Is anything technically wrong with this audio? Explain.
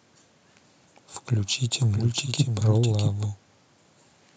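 Yes. From 1.80 to 3.26 s the speech carries a doubled audio track: a full-band copy trails roughly 0.7 s behind, about 5 dB quieter, with no decay or room colouring, cutting in and out abruptly. The likely cause is a second, slower capture path.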